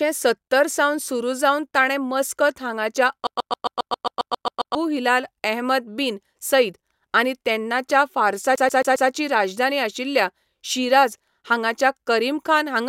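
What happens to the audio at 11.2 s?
Nothing goes wrong at 11.2 s; the speech runs on intact through that moment.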